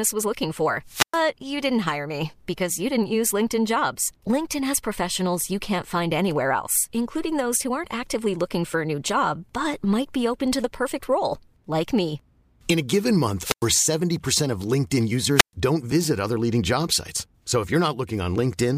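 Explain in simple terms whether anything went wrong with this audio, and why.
The speech drops out three times, at 0.86–1.24 s, 13.38–13.71 s and 15.35–15.53 s. Each is a wireless microphone squelch dropout: the radio signal fades, hiss rises, and the receiver mutes for about a tenth of a second before the voice returns.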